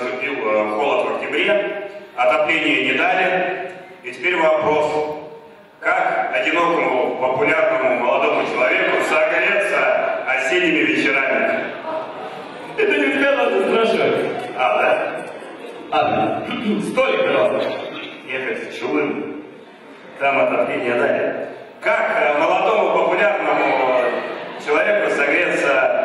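At 14.25 s the audio abruptly loses its top end, with nothing above roughly 11.8 kHz, then snaps back to full brightness at 20.25 s, with no gap at either edge. This is an adaptive stream at a lower bitrate. For those six seconds the player switched to a cheaper rendition, which fits a step down from about 96 kbit/s AAC to a low-bitrate HE-AAC stream of around 16 kbit/s.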